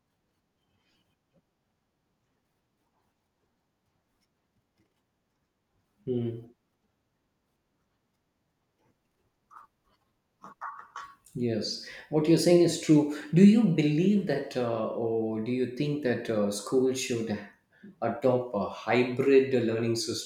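No technical faults can be heard anywhere in the speech recording, and the signal stays steady and intact throughout.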